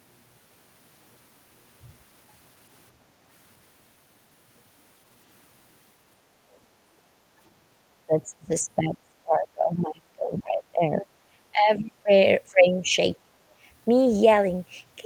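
From 6.95 to 7.39 s the echo canceller clamped the microphone while the far end played, producing background gated by the echo canceller: the room tone under this speech sinks by about 7 dB for under half a second, then returns as the canceller releases.

The speech then is turned down from 8.06 to 12.1 s, again at 12.5 to 12.92 s and at 13.22 to 13.37 s. This is likely speech suppressed in double talk, with the canceller treating the near talker as echo and pulling the level down by roughly 20 to 30 dB at its deepest.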